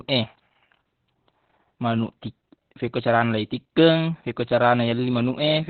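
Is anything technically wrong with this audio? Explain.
Yes. Throughout the clip the speech sounds muffled, hoarse and slightly robotic, with nothing above 4.5 kHz. This is heavy Opus voice compression: the SILK coder narrowed the band and coded the excitation coarsely, which fits a very low bitrate of around 8 kbps.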